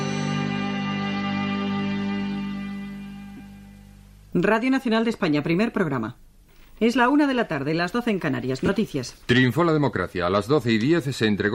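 Lost LE Audio frames at 3.37 to 3.40 s and 8.66 to 8.69 s: gaps of 30 ms and 22.5 ms, which fit four and three 7.5 ms frames, were filled by the LC3 decoder repeating the last spectrum with scrambled signs, giving brief noisy smears, alongside light codec damage.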